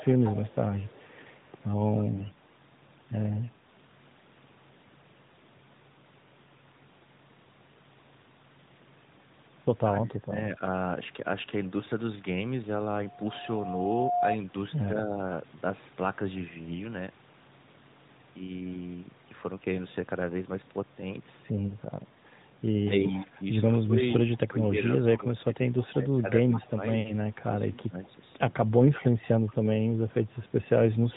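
A speech recording heard through a narrowband mobile codec, with nothing above 4 kHz, consistent with AMR-NB at its 12.2 kbps mode. From 0.0 to 2.03 s there is an echo leak. A faint delayed copy of the voice trails it by 176 ms. It sits about 20 dB below the speech. The likely cause is a far-end loudspeaker whose echo canceller let part of the microphone pickup return down the line. The same echo returns from 26.55 to 26.69 s and again from 28.04 to 29.54 s. Those scraps are louder, about 15 dB below the speech, with the same 176 ms lag. Right after, from 2.16 to 2.36 s, AMR bit errors strike. The voice keeps roughly its pitch and loudness but turns hoarse, scratchy and gargly for about 0.2 s. That points to a short burst of heavy damage on a weak radio link. The less protected bits of several codec frames arrived flipped, while the core checks still passed. The decoder then placed its excitation pulses wrongly and misread the finer pitch, gain and spectral values. 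From 9.88 to 10.61 s, speech is suppressed in double talk. The voice dips in pieces, about half a second in all, dropping as much as about 20 dB. The likely cause is both sides talking at once. The echo canceller could not tell this talker from the loudspeaker echo and turned both down.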